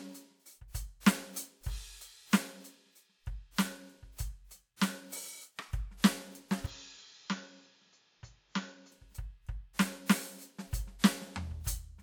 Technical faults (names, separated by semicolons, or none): pre-echo; input switched to a poorer device